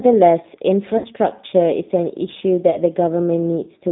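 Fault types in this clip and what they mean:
G.729 codec, throughout: The speech is rebuilt from a vocal tract filter, a pitch predictor and a few pulses per short frame rather than carried as a waveform. Here that is plainly audible as a rough, slightly synthetic texture, consistent with an 8 kbit/s coding rate. The line band runs only from 150 Hz to 3.7 kHz, so the low body and all brightness above that are missing.
VoIP packet loss concealed by the speech codec, at 0.98 to 1.06 s and 2.71 to 2.77 s: Audio went missing, and the decoder filled the gap by extrapolating from its last pitch and filter settings while lowering the gain. The first gap is 60 ms, which points to three lost 20 ms packets, and the speech is stretched out and fades. The second is 20 ms, fitting a single packet, and leaves a shorter blur.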